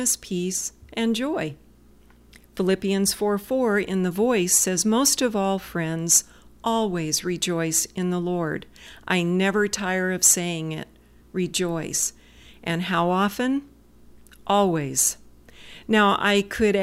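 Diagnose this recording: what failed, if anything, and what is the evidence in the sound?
Throughout, a faint hiss roughens loud, bright speech and vanishes in pauses: sample clock jitter at the converter, mistimed samples leaving error about 30 dB below.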